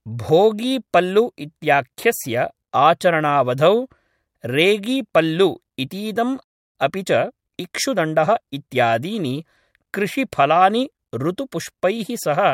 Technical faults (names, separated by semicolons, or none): playback stall; time-compressed catch-up